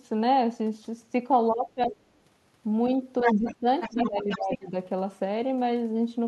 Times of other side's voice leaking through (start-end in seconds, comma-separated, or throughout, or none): 1.82-1.92, 3.20-3.55, 3.81-4.58